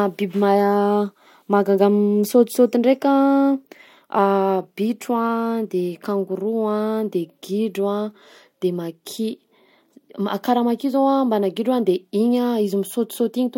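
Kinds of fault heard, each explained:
No audible faults anywhere in this recording.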